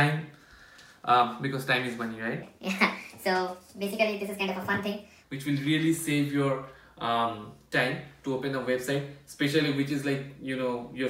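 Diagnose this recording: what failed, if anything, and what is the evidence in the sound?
A section at the wrong speed runs from 2.43 s to 5.24 s. It plays 1.37 times fast, with pitch raised by about five semitones as speed and pitch shift together. The likely stage is playback or editing, where the segment was clocked at the wrong rate.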